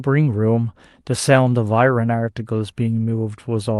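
No technical faults appear at any point in this speech, so there is nothing to describe in time order.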